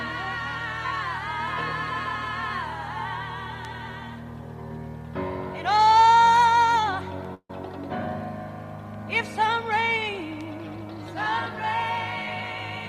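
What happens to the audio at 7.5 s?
A call audio freeze runs from 7.34 to 7.50 s, likely from delayed packets draining the jitter buffer: the last sound is stretched as a fading buzz, then briefly silent, before resuming 150 ms late with nothing lost.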